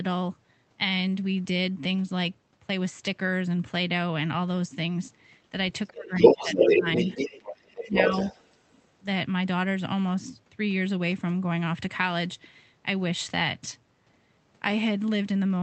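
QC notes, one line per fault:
5.89–6.86 s and 7.84–7.96 s, speech suppressed in double talk: the talker dips by about 15 dB, then briefly by about 10 dB, likely because the echo canceller ducked both voices during overlap.
6.05–8.87 s, other side's voice leaking through: a second voice is audible at roughly 5 dB above the talker's level, likely loudspeaker echo that the canceller failed to remove from the microphone.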